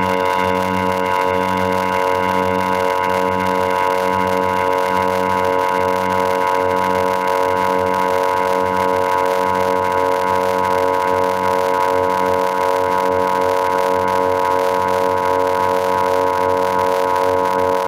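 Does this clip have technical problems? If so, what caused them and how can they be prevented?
Yes, two faults run through the whole clip.

The block size mismatch (padded) puts a short silent gap into every block, which produces a steady buzz at about 91.9 Hz. The sound also plays slowly, at 0.533 times normal speed, while keeping roughly its normal pitch. That fits 256-sample blocks being read into 480-sample blocks, with the remainder filled with zeros. A waveform shows regularly spaced flat stretches. A spectrogram shows vertical striping at the block rate and harmonic lines spaced about 92 Hz apart. Prevent it by making the writing and reading stages agree on one block size.

Gain pumping makes the level swing, pulling it down under each loud sound, by something like 15 dB. Loud and soft parts end up squashed toward the same level. The likely cause is input gain set far too high, with a fast limiter or compressor clamping down on every peak. 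On the waveform the envelope looks flattened. Prevent it by lowering the input gain so peaks leave headroom, and by using gentler or slower dynamics processing.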